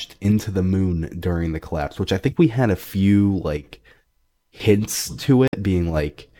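At 5.48 to 5.54 s, roughly 70 ms of the speech breaks up briefly, the sign of damaged data in a compressed stream. Corrupted bytes made the decoder misread frames and lose sync until it found a valid header. A plain dropout would simply fall silent instead.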